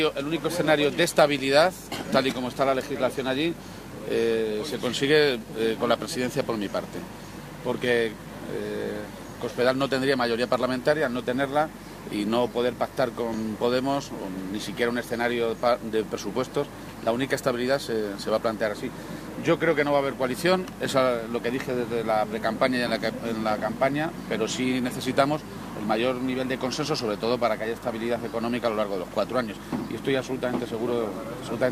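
The whole clip carries video or display buzz: a steady 50 Hz buzz with a hashy fizz sitting above it, plus a thin, very high whine at 15.6 kHz. The buzz sits roughly 20 dB under the wanted sound, so it's always there in the background rather than swamping anything. That pairing of a 50 Hz field-rate buzz and a line-rate tone is the classic sign of a screen or video cable leaking into the audio path, and it points to a 50 Hz picture standard. At 13.34 s there's also an overlap between stream segments. You hear a tiny skip where about 14 ms of audio has gone missing and the waveform jumps. Two adjacent chunks of the stream had overlapping time stamps, and the player trimmed the overlap as if it were duplicated when it wasn't. The stream here runs in 6 s segments.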